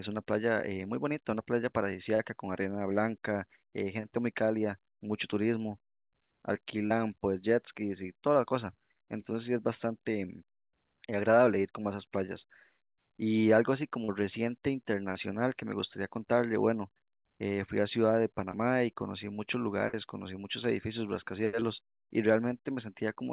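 Short concealed packet loss occurs at 2.15–2.20, 6.86–6.91, 14.04–14.09 and 15.11–15.16 s, each time about 40 ms of audio arriving too late to decode. The receiver stretches the preceding sound across each hole and crossfades back, leaving a brief smear or wobble. A smaller 10 ms dropout at 18.51–18.54 s is patched the same way.

A burst of packet loss follows at 19.88–19.94 s. Roughly 60 ms goes missing in a row, and the concealment extends the last sound while fading it out. The result is a short held, decaying tail, after which the audio resumes with that stretch gone.

One more short concealed loss, about 10 ms, appears at 21.60–21.62 s as a brief smear. Throughout, the call path passes nothing above 4 kHz, which fits a G.711 A-law link.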